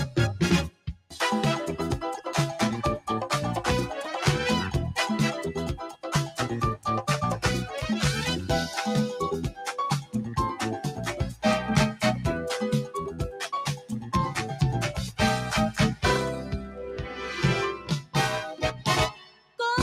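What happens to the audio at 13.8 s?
At 13.76 to 14.1 s the sound gets cut by the noise suppressor: it mistakes this stretch for noise and pulls it down by about 13 dB, so it sags and thins for roughly a fifth of a second. That happens because a speech noise suppressor was left on for music or sounds across the whole clip, and its gain swings by around 10 dB as it chases steady material.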